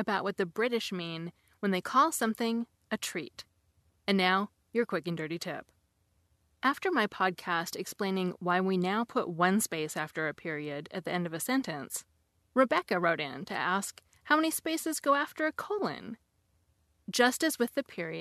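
No technical faults are audible anywhere in this recording.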